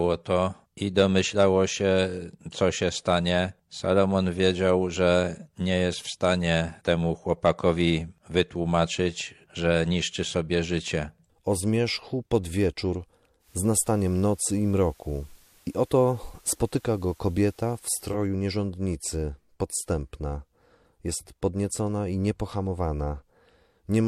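Hard clipping hits three times: 0.98 to 1.44 s between "to i" and "się co się", 7.32 to 7.69 s and 8.38 to 8.41 s. Peaks overdriven by about 2 to 4 dB get sliced flat, giving a crackly edge. From 13.39 to 18.19 s, between "zmierzchu pod wieczór" and "nierządnicy podstępna", the digital radio drops and blends to analogue FM over 127 ms each way. Hiss sits roughly 35 dB down, and the level shifts by about 1 dB.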